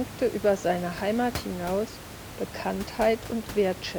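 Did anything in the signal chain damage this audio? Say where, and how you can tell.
No, nothing in the chain has damaged this speech recording; the only thing beneath it is the room's own background noise, sitting about 13 dB below the speech, which belongs to the acoustic space at the microphone rather than to any stage of the system.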